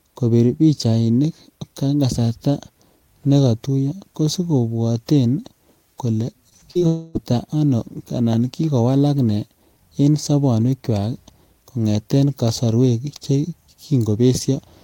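From 6.49 to 6.83 s the speech turns choppy and robotic. This is repeated packet loss. Five short gaps, the longest 47 ms, were each patched by stretching the last sound. About 41 percent of that span is concealment, so pieces are missing.

At 6.87 s the speech gives way to a smeared, buzzy continuation lasting about 0.3 s, up to 7.17 s. It never drops to silence. A long network dropout is the likely cause, with the gap papered over. Speech resumes at "ano anan kikowalak".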